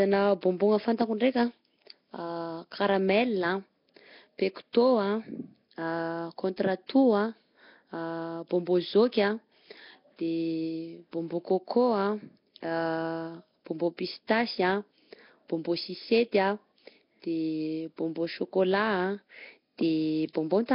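The speech is heavily degraded throughout, with a rough, hissy halo, a smeared underwater quality and nothing above 5.3 kHz. This is likely Nellymoser compression, at a rate around 22 kbps, where weak bands get no bits and are refilled with noise. Pre-echo appears at 0.41 s, 4.73 s and 20.33 s. In each case a brief hiss of roughly 14 to 18 ms runs ahead of a sharp onset, because quantisation noise spread across the transform block leaks into the quiet moment before the attack and softens it.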